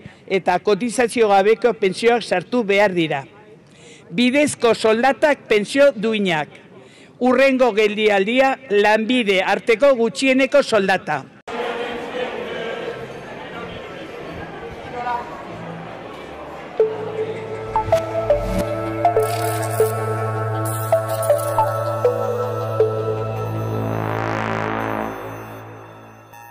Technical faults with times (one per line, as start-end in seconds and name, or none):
0.00-26.50 hard clipping